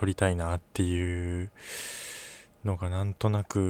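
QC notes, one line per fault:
No faults found in this speech recording on audition.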